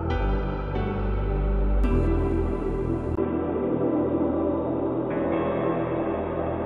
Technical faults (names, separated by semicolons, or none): input switched to a poorer device